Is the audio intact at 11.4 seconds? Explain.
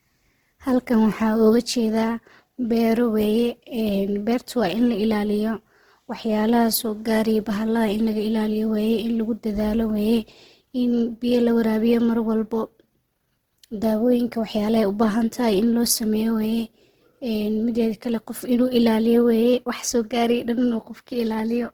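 No. At 11.4 s, as throughout the clip, the speech has a noisy, rough, grainy texture, with plainly audible damage but few spectral holes and little swirl. The likely cause is Opus compression in its CELT music mode: with too few bits, the encoder preserves each band's energy but fills band detail by folding lower bands or inserting noise. Content still reaches about 20.1 kHz, and the damage level fits a low bitrate near 16 kbps.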